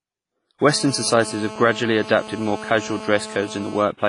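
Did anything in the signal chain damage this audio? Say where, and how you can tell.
Yes. At the codec stage, the whole clip has washy, ringing speech with hiss that swells and fades with the signal, and nothing above 10.4 kHz. The damage is heavy. This is likely WMA compression, where long-block quantisation noise smears in time and weak spectral lines are zeroed, consistent with roughly 24 kbps.

In the analogue wiring, a GSM phone buzz runs from 0.69 to 3.83 s. It is a hard, raspy 217 Hz tone with dense harmonics at about 14 dB below the speech. The audio circuit rectifies a nearby phone's transmit bursts, and the buzz holds steady, as it does during a call.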